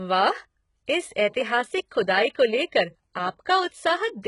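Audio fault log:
throughout: HE-AAC compression. The speech carries heavy codec damage, with nothing above 11 kHz. The treble sounds bright but synthetic, and s sounds turn gritty and lispy. The likely cause is spectral band replication copying lower bands upward, which fits a bitrate near 12 kbps.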